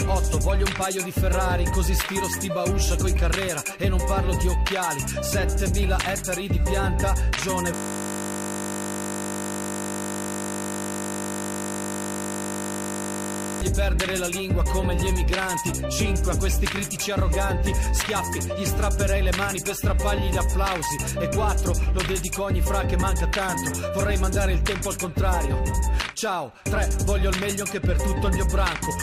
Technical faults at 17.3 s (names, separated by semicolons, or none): none